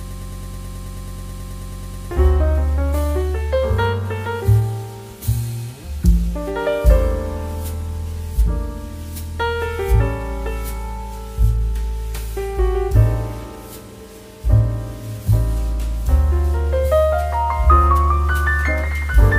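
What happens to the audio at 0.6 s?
At 0.6 s the audio is stuck in a broken-record loop: a fragment about 0.11 s long repeats exactly, back to back, already under way when the clip starts and continuing to 2.11 s. The likely cause is a stalled player or stream resending its last buffered fragment, so the intended audio there is lost.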